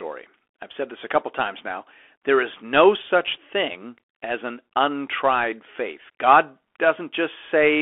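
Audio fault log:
throughout: Bluetooth CVSD headset codec. The speech is confined to a telephone band of 300 Hz to 3.4 kHz, with scratchy s sounds, a granular hiss underneath and plainly audible distortion where a one-bit up/down delta stream, consistent with 64 kbps CVSD, cannot follow steep loud peaks.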